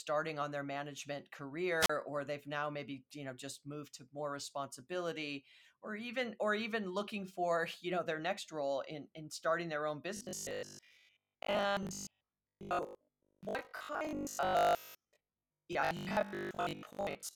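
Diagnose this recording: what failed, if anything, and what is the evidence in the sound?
A wireless microphone squelch dropout occurs in the analogue radio link at 1.80 to 1.90 s, after "on their management". Hiss rises, the receiver mutes for about 37 ms, and sound returns at "or they've now maybe". A spectrogram shows a broadband noise smear and then a near-blank gap.

Robotic sound from repeated short buffers runs from 10.17 s, after "in starting their own", to 17.35 s. The sound becomes a rigid metallic buzz at 50 Hz. The likely cause is a driver buffer underrun that replays 20 ms chunks while most of the real audio is skipped. The spectrogram shows fixed 50 Hz harmonic lines, and the waveform shows identical repeating blocks.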